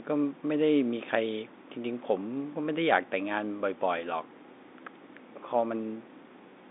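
No technical faults are audible.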